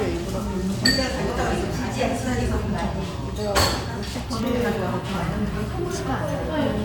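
No technical faults can be heard anywhere in this recording of sounds. Nothing breaks, drops out or changes unexpectedly in the audio.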